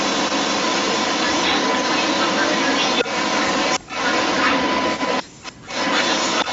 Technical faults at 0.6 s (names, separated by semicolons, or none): echo leak